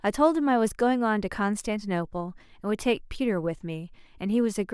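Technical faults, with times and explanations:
The speech recording contains no technical faults. There is nothing here to time or explain.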